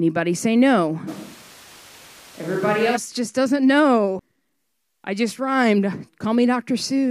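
From 1.09 to 2.95 s the speech turns roomy and hollow, with thinner bass and background noise rising to around 25 dB below the speech, though loudness barely changes. This is likely a switch to a distant microphone; unlike reverb added in processing, it starts and stops abruptly.

At 4.19 s comes a CD skip: the laser jumped tracks, giving a tick, a very brief mute, and playback resuming elsewhere. Unlike a dropout, the speech does not continue where it left off but leaps to another point.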